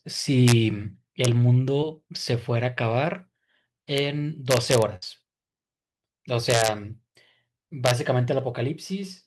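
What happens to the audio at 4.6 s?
At that point the speech is hit by integer overflow, from 4.51 to 4.82 s. The level is driven about 2 dB past the integer limit, and instead of being held at the ceiling, each peak that crosses it wraps around to the opposite extreme. It is heard as harsh, violent cracks on the loudest moments, far sharper than clipping. On a waveform the peaks jump abruptly from top to bottom. A spectrogram shows bright vertical broadband streaks.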